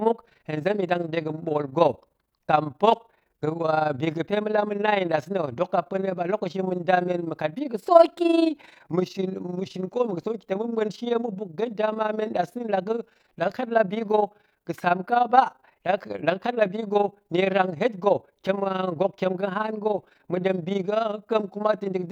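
From start to finish the speech carries overlap-add ripple: frames were windowed and recombined with an overlap whose gains don't sum evenly, so level dips about 11 dB once per frame, roughly twenty times a second. It sounds like a rough, fast flutter; the waveform shows regular envelope scallops, and the spectrogram shows evenly spaced vertical bands.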